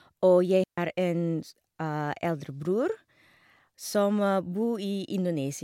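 A digital wireless dropout cuts into this speech clip from 0.64 to 0.78 s, leaving a clean hole of near silence about 140 ms long. The receiver stopped getting enough usable data from the transmitter and, rather than passing on corrupted audio, muted its output with a very quick fade. That is why the gap has sharp edges and no burst of hiss, crackle or static on either side.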